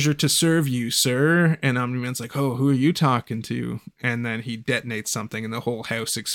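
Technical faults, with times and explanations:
4.90–6.10 s, GSM signalling bursts: just after "then he", a galloping dit-dit-dit of short buzzes sits roughly 30 dB below the speech. A nearby 2G phone is exchanging brief groups of radio bursts with the network rather than carrying a call. The audio circuitry rectifies that radio energy into clicks, and each group's rapid pulsing at about 217 Hz comes through as a buzz.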